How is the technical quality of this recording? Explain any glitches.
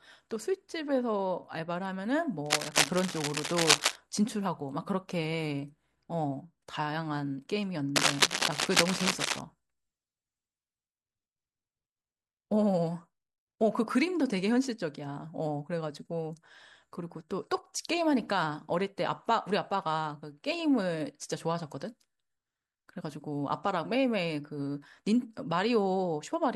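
The speech is marred by two bursts of cable scratch noise, from 2.46 to 3.96 s and again from 7.96 to 9.41 s. Each is a patch of dense, ragged scratching roughly as loud as the speech itself, likely a worn cable or connector being moved so its contact resistance jumps about.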